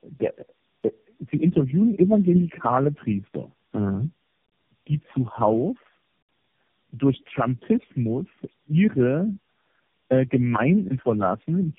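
Speech, with tandem speech coding throughout: the roughness, muffling and warbling build on each other, as if the signal was decoded and re-encoded several times, fitting four low-rate AMR-NB stages in a row. A single codec pass would sound cleaner. Nothing remains above 3.5 kHz.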